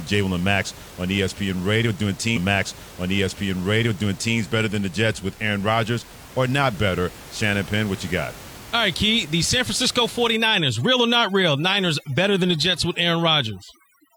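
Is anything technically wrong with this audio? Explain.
Yes. From 2.33 to 4.33 s a stream segment is repeated: the player queued the same chunk twice, so about 2.0 s of speech replays after a small blip at the jump back, visible as an identical waveform block appearing twice. From 10.36 s to the end, overdone noise removal drops the background, which breaks up into twinkling specks; the spectrogram shows bands switching off in patches. The room noise, about 20 dB below the speech, is part of the recording.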